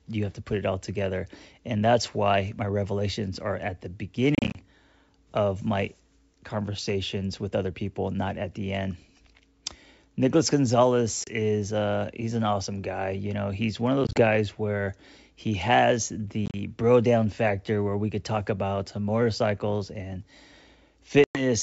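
Packet loss on an ADPCM call breaks up this wideband speech: dropped packets are replaced by silence, and the decoder's predictor and step size lose track of the sender's. The result is hard-edged gaps, mostly in bursts of short holes up to 30 ms each, after "revelations are at the" (4.35–4.59 s, 120 ms missing), just before "uh he's an awesome" (11.24–11.33 s), between "know he's one of" and "where he has" (14.04–14.21 s), and at 16.46–16.56 s and 21.24–21.43 s. Each gap is followed by a mistracked restart while the decoder resynchronises.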